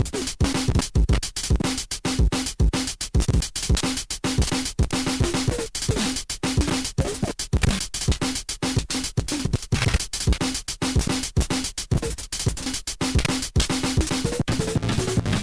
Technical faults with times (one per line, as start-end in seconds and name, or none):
0.00-15.43 aliasing